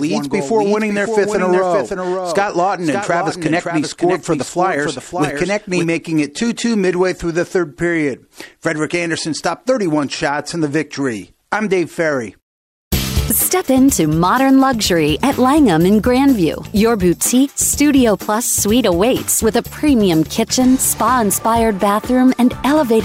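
A second, likely delayed capture path mixes in a doubled audio track from the start to 5.84 s: an undecayed copy about half a second behind, around 5 dB quieter, ending abruptly.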